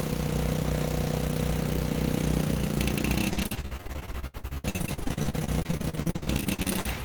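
From 3.29 s to 6.97 s the audio turns choppy, with a robotic, stuttering texture and small pieces of sound dropping out. This is repeated packet loss (robotic sound). Dozens of short holes open in quick succession, the longest about 71 ms, and each is papered over by stretching the last received sound forward. Nearly half of this stretch is such patched-in material, which produces the robotic, mechanical character.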